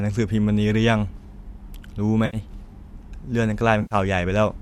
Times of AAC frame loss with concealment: 2.25-2.37, 3.82-3.95

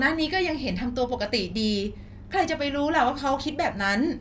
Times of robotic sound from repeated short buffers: none

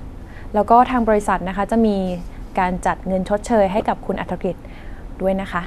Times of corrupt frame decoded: 3.78-3.82

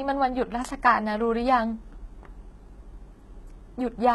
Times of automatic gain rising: none

